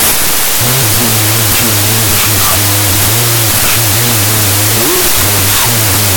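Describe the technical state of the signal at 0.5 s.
At 0.5 s the signal suffers a wrong sample width fault that runs through the whole clip. The data fit 32-bit float samples being read as 16-bit integers, so each value is pieced together from mismatched bytes. The speech plays at 0.5x speed, an octave low, buried under loud broadband noise. A spectrogram shows dense noise filling every band with faint, stretched speech harmonics.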